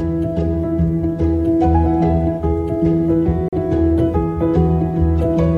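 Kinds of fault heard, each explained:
Gap between stream segments: Two consecutive stream segments do not quite meet in time, and the player fills the missing stretch with silence. Here the sound stops abruptly from 3.49 to 3.53 s, a 41 ms hole with hard edges on both sides. It falls at the join after a 4.0 s segment. Nothing is cut from the sound itself. The silence is inserted, so everything after it plays slightly later.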